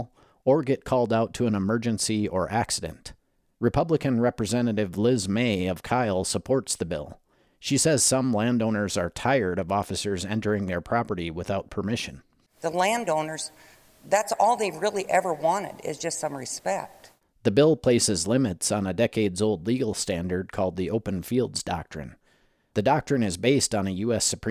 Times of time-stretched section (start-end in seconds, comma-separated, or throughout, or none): none